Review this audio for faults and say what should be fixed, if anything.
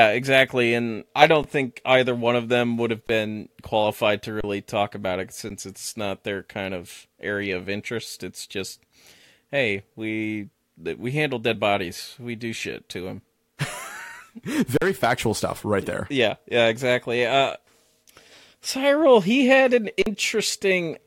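The speech briefly freezes into flat silence six times: 1.43 s (between "exactly and I" and "think either one of"), 3.07, 4.41 (between "qualified to" and "talk about it"), 5.49, 14.77 and 20.02 s (after "he had an"). Each dropout lasts 11 to 43 ms. This is an underrun with held sample. The output buffer emptied, and the converter held its last value, so the sound goes still. About the same stretch of live audio was skipped during each gap. Gap lengths of 512, 1024 and 2048 samples suggest buffer-sized shortfalls. To prevent it, enlarge the playback buffer or raise the audio thread's priority so it always refills before running dry.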